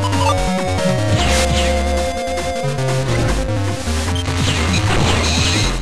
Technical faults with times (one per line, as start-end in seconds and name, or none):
2.63-2.65 damaged data in a compressed stream
5.23 damaged data in a compressed stream